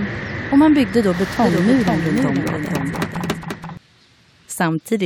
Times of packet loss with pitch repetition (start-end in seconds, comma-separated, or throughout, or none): none